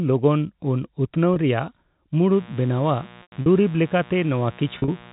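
Speech over a telephone-band channel, with the G.711 mu-law coding itself adding nothing audible. Just after "ᱞᱚᱜᱚᱱ ᱩᱱ ᱩᱛᱱᱟᱹᱣ", at 1.34–1.36 s, the sound briefly holds with a buzzy tone, and at 3.22–3.46 s and 4.78–4.88 s it stutters, fades and returns. This is packet loss with pitch repetition: the receiver repeats the last pitch period to cover 20 ms, then 160 ms and 80 ms of scattered gaps. From 2.32 s to the end a steady raspy buzz sits about 25 dB below the speech. This is mains buzz, switching spikes carrying 60 Hz harmonics into the signal.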